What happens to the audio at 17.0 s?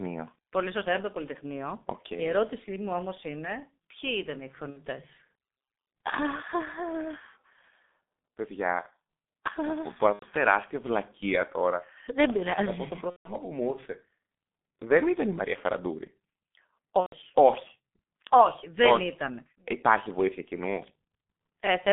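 At 17.00 s there's a dropout handled by VoIP packet loss concealment in the speech codec, lasting until about 17.15 s. Roughly 120 ms of data went missing, which fits four lost 30 ms frames. The decoder keeps extrapolating from its last pitch and filter settings while turning the gain down each frame, so you hear the sound stretched into a fading buzz or coloured noise instead of real speech, muted from the third lost frame on, and the voice stays weak or distorted for a bit after the data returns.

All of this sits on top of the heavy G.723.1 codec damage that runs through the whole clip. The audio is squeezed into roughly 200 Hz to 3.6 kHz, the sound points to a bitrate of about 6.3 kbit/s, and the slowly updating voice model leaves the speech muffled and hoarse, with smeared consonants.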